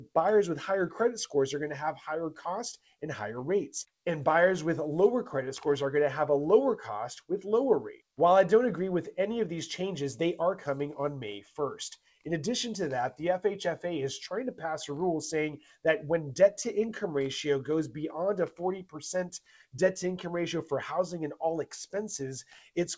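No technical faults can be heard anywhere in this audio.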